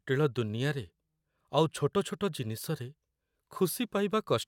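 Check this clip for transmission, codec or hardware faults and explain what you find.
Nothing stood out on listening to this speech recording.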